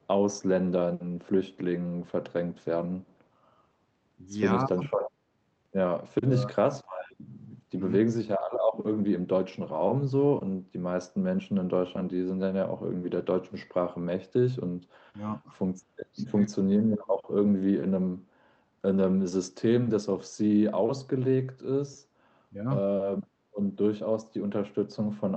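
Speech passed through a call link whose echo cancellation fails twice. From 4.74 to 4.84 s, the canceller likely mistook overlapping talk from both ends for loudspeaker echo and turned everything down. The result is speech suppressed in double talk: the voice dips by about 15 dB for roughly a tenth of a second. Later, from 16.97 to 17.14 s, one side's loudspeaker pickup was likely not fully removed before being sent back. This echo leak is heard as a faint copy of the speech trailing 216 ms behind it, about 15 dB quieter.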